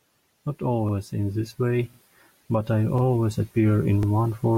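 Speech with overlapping chunks: at 0.89, 1.94, 2.98 and 4.03 s, a 48 ms slice replays as 1-second chunks begin before the previous ends, giving a regular stutter. The waveform shows a repeated segment with a hard splice, and the spectrogram a thin vertical seam.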